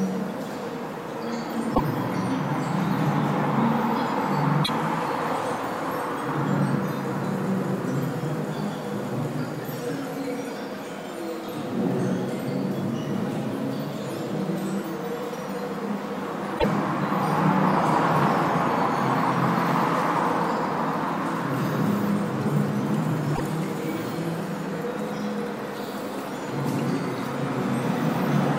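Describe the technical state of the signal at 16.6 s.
At 16.58 to 16.65 s the audio jumps ahead with a brief chirp, noise burst or short hole. This is likely a broken MP3 bit reservoir, where frames decoded stray borrowed data after a cut.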